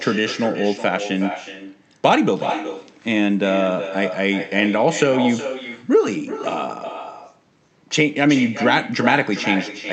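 Throughout the speech, an echo with no canceller repeats each phrase roughly 400 ms later, about 9 dB down: far-end loudspeaker pickup returned uncancelled, heard as a thinner shadow.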